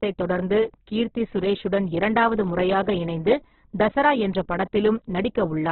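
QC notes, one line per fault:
throughout, Opus compression: speech stops dead above 4.1 kHz and sounds rough and grainy, likely heavy Opus encoding at a bitrate around 8 kbps.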